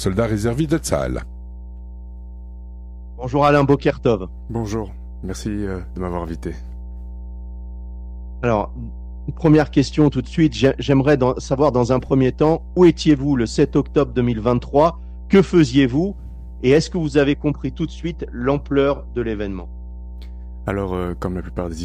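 A steady low tone at 60 Hz runs underneath the audio from start to finish, sitting only about 15 dB below the wanted signal. This is mains hum: the power line's 60 Hz alternation has leaked into the signal path, typically through a ground loop between connected equipment or magnetic coupling from a nearby transformer, and was recorded along with the sound.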